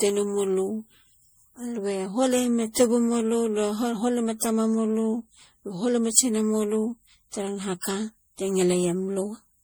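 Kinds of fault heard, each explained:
Generation loss: The speech sounds swirly, smeared and hollow throughout, more than a single lossy encode would leave. Consonant attacks are blurred and soft. The most likely cause is repeated lossy coding, around seven passes, each quantising on a shifted frame grid so noise and spectral gaps pile up. The texture fits MP3 at about 64 kbit/s. Nothing is present above 20.9 kHz.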